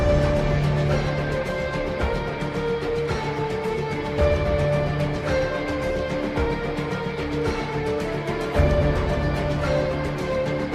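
Nothing stood out on listening to this clip.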